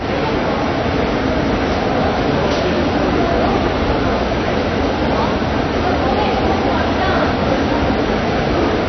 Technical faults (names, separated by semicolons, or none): AAC compression